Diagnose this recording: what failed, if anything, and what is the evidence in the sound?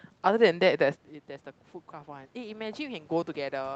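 Automatic gain rising, from 1.89 s to the end, in the call processing stage. The input drops by about 15 dB and the gain control lifts its gain gradually, so the speech and the room noise swell together instead of recovering at once.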